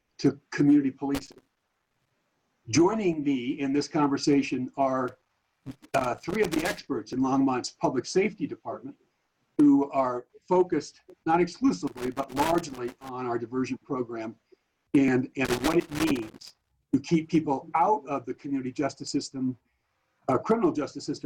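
Loose connector crackle first appears from 1.15 to 2.1 s: an irregular burst of scratching and crackle as a worn or dirty contact rapidly breaks and remakes the signal path, chopping the audio. It returns from 5.08 to 6.88 s, 11.87 to 13.09 s and 15.45 to 16.72 s. What sets it apart from the clicks below is its texture and duration. Each episode is a ragged cluster lasting one to nearly two seconds, with no steady rhythm.

Overlap between stream segments produces single, tiny clicks or skips at 3.13, 7.13, 11.10, 15.08 and 19.07 s. Two segments carry overlapping time stamps, and the player trims the overlap even though the audio wasn't actually duplicated. Between 5 and 14 milliseconds of sound vanish and the waveform jumps. Unlike the crackle, each event is one isolated skip, and the skips recur on a regular grid about 4 s apart, which lines up with the 2 s segment boundaries.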